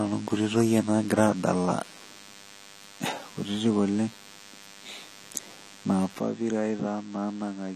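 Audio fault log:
Throughout: DECT cordless phone buzz. A thin, steady buzz at 100 Hz runs under the speech, rich in harmonics. It sits roughly 25 dB below the speech. A nearby DECT handset or base sends a radio burst every 10 ms, and the audio circuit rectifies each burst into sound.
Throughout: AAC compression. The speech sounds dull and smeared, with a warbling, fizzy edge on sibilants. Nothing is present above 14 kHz. This is likely AAC-LC coding at a low bitrate, which fits about 32 kbps. The encoder lowers its cut-off and quantises coarsely.
6.19 to 7.75 s: input switched to a poorer device. From 6.19 s the sound turns duller and boxier, with no gap at the change. Nothing is present above 8.3 kHz. The level falls by about 5 dB, and a faint new noise floor appears. The cause is likely a change of input to a narrower-band microphone or headset.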